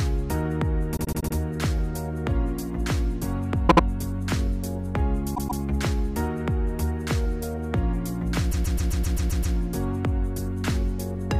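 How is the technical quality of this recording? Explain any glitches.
The recording has audible stutters from repeated frames at four points, where a short stretch of compressed data is decoded and played again. The stutters are at 0.96–1.35 s and 3.67–3.83 s, where a 78 ms block, which fits three frames, is played five and then two extra times. A 131 ms block repeats twice extra at 5.34–5.61 s and eight times at 8.50–9.55 s, which adds about 1.04 s.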